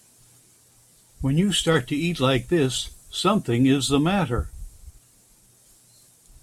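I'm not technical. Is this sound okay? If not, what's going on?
No. There is a faint gritty fizz over the speech from start to finish. That is crude rate conversion. The audio was stretched from 44.1 kHz to 48 kHz by simply blending neighbouring samples. That shortcut adds stray tones that ride along with the louder, brighter sounds.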